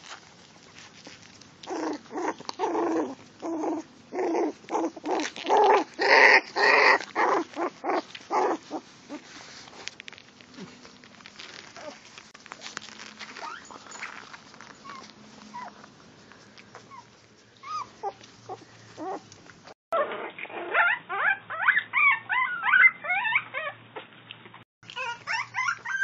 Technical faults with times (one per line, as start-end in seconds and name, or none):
12.31-12.34 gap at a join of encoded pieces
19.73-24.83 input switched to a poorer device